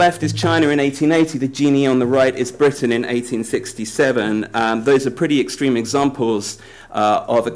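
No technical faults can be heard in this clip.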